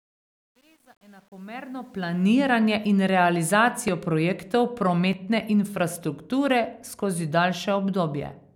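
From 0.0 to 2.33 s the fade-in shows truncation distortion: undithered processing, consistent with roughly 9-bit resolution, steps the waveform, making the quiet opening gritty, worst before 1.79 s.

At 3.88 s and 5.13 s there is a small jump in the audio, likely a dropped buffer (overrun) losing about 10 ms each.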